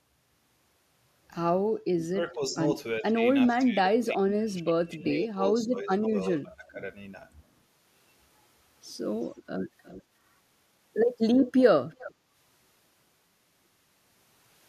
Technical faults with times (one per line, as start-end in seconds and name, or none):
1.92-2.58 speech suppressed in double talk
3.00-6.13 speech suppressed in double talk
5.06-5.17 echo leak
6.42-6.79 speech suppressed in double talk
9.23-9.43 echo leak
9.84-10.03 echo leak
11.91-12.14 echo leak